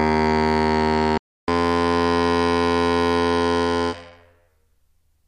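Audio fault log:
1.18–1.48 s, playback stall: the music just cuts out mid-flow for about 0.3 s of dead silence, then picks up again. That's most likely the player running dry of data or its thread getting blocked, so nothing reached the output until it recovered.
1.48–4.48 s, catch-up at higher speed: right after the gap the music runs at 1.1 times normal speed, so the pitch climbs by about a semitone and a half. The player is resampling to burn through its backlog, then it settles back to normal speed and pitch.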